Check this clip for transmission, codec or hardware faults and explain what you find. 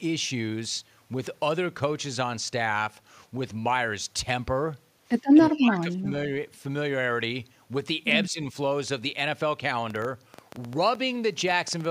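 Two kinds of fault are present: speech lost to double-talk suppression in two places, and a train of clicks near the end.

Speech suppressed in double talk occurs from 5.31 to 6.12 s and again from 8.29 to 8.54 s. The likely cause is an echo canceller that could not tell the near talker from loudspeaker echo while both ends spoke. It attenuated everything. In the first stretch the level falls by up to roughly 20 dB, with most of the interval affected. The second dip is shallower, around 10 dB, and lasts only about a tenth of a second.

A train of clicks runs from 9.9 to 11.86 s, probably from electrical interference or a struggling interface injecting repeated pulses. Around fifteen similar clicks arrive at about 8.2 per second, but with irregular spacing rather than a steady beat. They stand roughly 5 dB above the speech. They are heard as an uneven ticking laid over the sound and are audible in the gaps too.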